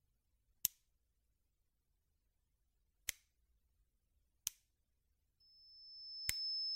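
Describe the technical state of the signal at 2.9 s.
At 2.9 s the sound is intact, with no dropout, click, distortion or other fault in the signal at that moment.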